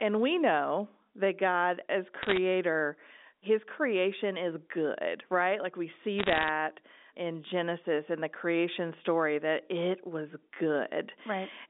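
Bit errors on a digital phone line hit this telephone-band speech at 2.22–2.37 s and 6.18–6.49 s as bursts of sharp ticking crackle. Flipped bits each corrupt one sample, at around one and a half percent, then under one percent.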